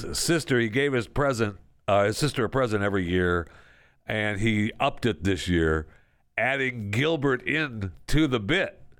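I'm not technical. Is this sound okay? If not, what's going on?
Yes, this speech recording sounds fine, and there's nothing going wrong with it that you need to worry about.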